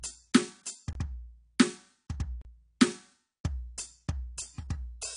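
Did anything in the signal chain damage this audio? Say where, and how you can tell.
Yes. At the codec stage, the music has nothing above 10.2 kHz throughout, and sounds dull and smeared with a plainly audible coded texture. The likely cause is AAC compression at a low bitrate, around 32 kbps. On a spectrogram, energy stops at a flat ceiling, with patchy holes below it.

At the driver or buffer stage, there are two blocks of digital silence, at 0.93–0.95 s (23 ms) and 2.42–2.45 s (35 ms). The first fits a 1,024-sample buffer left unfilled. The waveform drops to a near-flat line with abrupt edges, and the spectrogram shows blank vertical strips.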